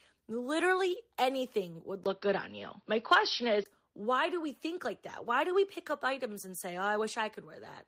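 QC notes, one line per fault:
2.04–3.66 s, input switched to a poorer device: after "anything would", a 20 ms gap in the waveform, then sound dulls, spectrogram band narrows, level shifts about 5 dB, likely another microphone.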